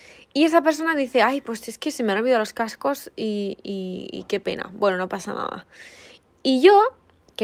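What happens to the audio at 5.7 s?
Nothing goes wrong at 5.7 s; the speech plays through that point intact, with no dropout, click, glitch or other fault.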